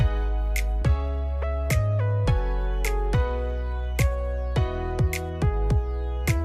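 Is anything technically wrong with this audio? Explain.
Yes. Throughout the clip a steady buzz at 100 Hz rides on the sound, present only while there is signal. This is a resampler restarted on every block: each 10 ms block was converted separately, which fits 44.1 kHz to 48 kHz, so every block edge carries a small error.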